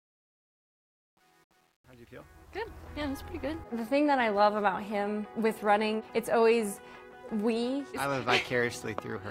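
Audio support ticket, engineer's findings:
Truncation distortion on a fade, 0.0 to 2.82 s, worst 0.0 to 2.49 s. Gritty grain on the quiet part of the fade-in. Probable component: digital gain or fade stage with no dither, which fits a 9-bit word. Waveform: stair-stepped, squared shapes at low level. Spectrogram: broadband grit spread above the signal's harmonics, clearing as the level rises.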